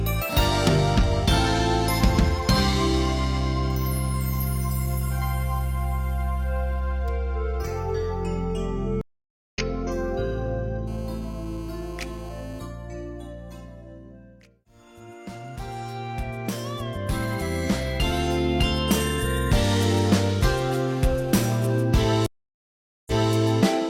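At 9.01 s a stream reconnect interrupts the audio. The connection dropped and the player restarted its decoder mid-stream. About 525 ms of silence follows. The sound then fades back in at a point roughly 0.4 s later, so a short stretch is lost.

From 10.88 to 12.60 s a GSM phone buzz appears. A nearby 2G phone on a call transmits in bursts 217 times a second, and the audio circuitry rectifies them. The result is a hard, raspy 217 Hz buzz, about 24 dB below the signal. It returns from 20.88 to 21.83 s, about 23 dB down.

At 22.26 s a second stream reconnect brings 804 ms of silence. Playback resumes 279 ms earlier, so a brief stretch repeats as the server resends its burst.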